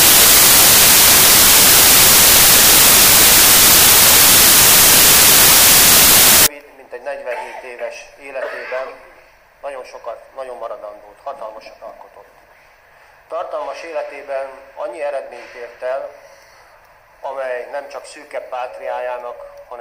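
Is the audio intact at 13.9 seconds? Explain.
Yes, at 13.9 seconds the audio is intact, with no dropout, click, distortion or other fault to be heard at that moment.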